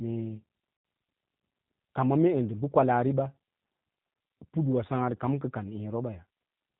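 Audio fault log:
throughout: G.729 codec. The speech is rebuilt at 8 kbit/s from a vocal tract filter, a pitch predictor and a few pulses per frame, with nothing above 4 kHz. That gives a dull, plainly rough, slightly synthetic quality across the clip.
0.77–0.85 s and 4.14–4.16 s: VoIP packet loss concealed by the speech codec. The decoder fills the 80 ms gap, which fits four 20 ms packets, and the 20 ms gap, which fits one packet, by extending its last pitch and filter at falling gain. This leaves a stretched, fading smear, buzzy or noisy, that stays weak or distorted briefly after each gap.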